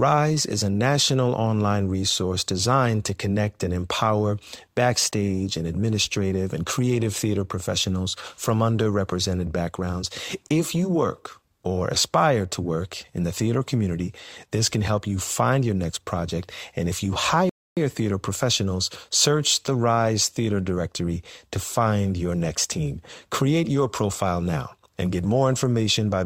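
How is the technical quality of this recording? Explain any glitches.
One glitch stands out: a rebuffering stall at 17.49 s, lasting until 17.77 s. The player ran out of downloaded audio and had to pause until more data came in, so playback simply froze. After "if you" the speech drops into dead silence for about 0.27 s, then picks up cleanly with "theater professionals search the", exactly where it left off. No speech is skipped or repeated; the stall only inserts that extra gap of time.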